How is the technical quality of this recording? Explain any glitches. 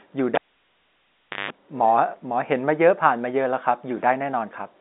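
One clear glitch spoils the opening of this speech clip, heard over a telephone-band G.711 A-law line that cuts everything above about 3.8 kHz.

From 0.35 to 1.51 s there is a cable pulled and plugged in. A pop marks the break, then about 1.10 s of near silence, then about 0.16 s of 50 Hz mains buzz while only the plug tip makes contact, and a second pop as the sound comes back. On the waveform the pops are sharp single spikes around a flat gap. The spectrogram shows them as thin full-height vertical lines, with the buzz as a short stack of horizontal bands at 50 Hz and its harmonics.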